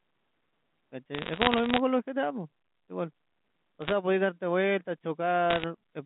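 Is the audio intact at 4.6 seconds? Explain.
Yes, the speech at 4.6 seconds is intact, carried cleanly through the G.711 telephone coding with nothing breaking into it at that point.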